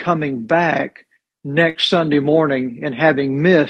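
A burst of packet loss at 1.69 to 1.78 s: lost packets leave about 53 ms filled by a fading continuation of the last sound, then playback resumes with roughly 60 ms missing.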